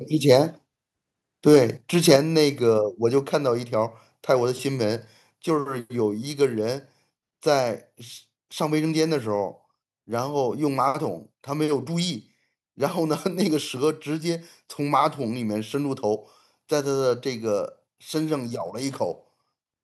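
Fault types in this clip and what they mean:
Microphone overload: Three short harsh, crackling bursts at 0.29–0.35, 1.48–1.58 and 2.08–2.16 s, most likely from input gain set too high, with peaks pushed about 2, 4 and 5 dB past full scale. The waveform shows flattened, squared-off tops, and the spectrogram shows broadband vertical smears.
Microphone volume stepped down: At 2.16 s, right after the worst overloaded peak, the whole signal, voice and background alike, drops by about 5 dB in one step, likely because the call software cut the input level. The waveform envelope shrinks abruptly, and the spectrogram dims uniformly across all frequencies.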